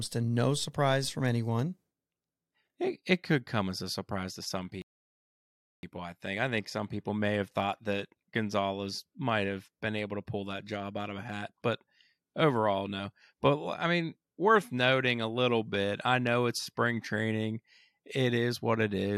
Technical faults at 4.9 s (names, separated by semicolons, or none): rebuffering stall